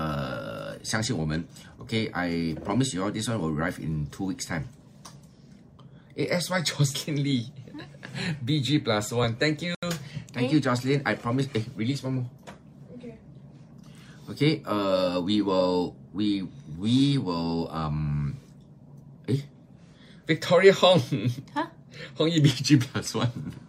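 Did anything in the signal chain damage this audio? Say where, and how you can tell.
Yes. At 9.75 s the sound drops to dead silence for about 78 ms, then resumes at 9.83 s without a crossfade. That pattern points to the playback link, likely a Bluetooth stall: interference delayed packets, the headphone buffer emptied, and output paused until retransmissions arrived.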